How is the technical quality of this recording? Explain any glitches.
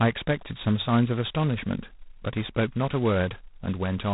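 Pretty rough. The whole clip has heavy G.726 ADPCM damage, a harsh rasping hiss that follows the speech level, nothing above 3.8 kHz. The coarse prediction-error coding sounds like the 16 kbit/s mode.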